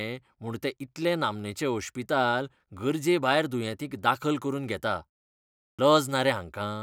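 At 5.67 s, after a pause of about 0.65 s, the speech comes back abruptly, as if it started mid-sound: its opening is missing up to 5.79 s, roughly 116 ms swallowed. This is a clipped start after a pause. The output device went idle during the silence and needed time to wake or relock, so the first part of the returning speech was lost before playback resumed.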